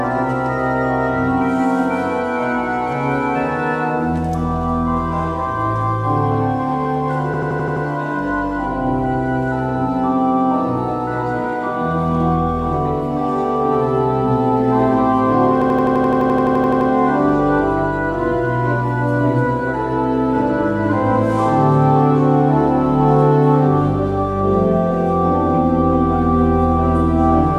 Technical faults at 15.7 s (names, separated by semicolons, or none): system hang loop